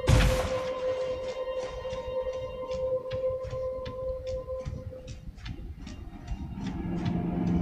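No technical faults can be heard anywhere in the audio; the signal stays steady and intact throughout.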